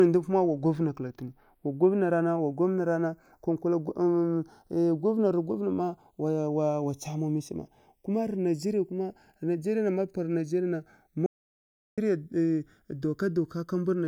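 Right from the start, the two channels are drifting apart: they seem to run on separate clocks, off by around 40 ppm, so the gap between them creeps to under a millisecond and mono playback picks up a slow, sweeping flange. Then from 11.26 to 11.98 s there's an audio dropout to silence, roughly 0.71 s of silence with no room tone, most likely the input dropping out while recording carried on.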